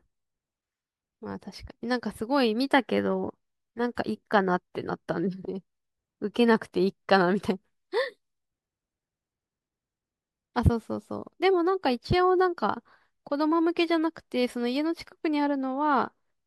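There are no technical faults to describe in time order.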